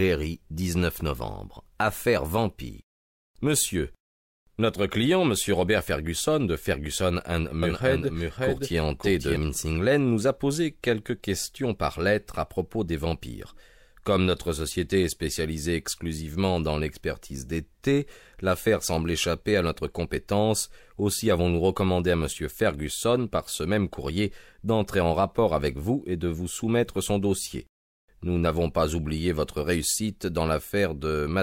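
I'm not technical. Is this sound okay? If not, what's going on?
No. There's a doubled audio track from 7.63 to 9.37 s. A second, somewhat quieter copy of the sound plays about half a second behind the original, then cuts off abruptly. It's likely the sound being captured twice, once through a slower route.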